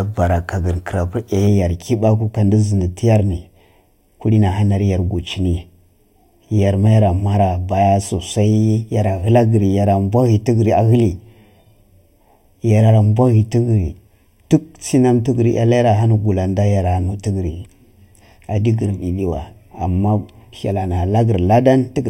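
From 1.47 s to the end, the speech has channel delay (comb filtering): one channel lags the other by around 0.4 ms, and the mono sum cancels at evenly spaced frequencies from about 1.5 kHz up. Unlike flanging, the notches stay fixed, giving a steady hollow, phasey tone.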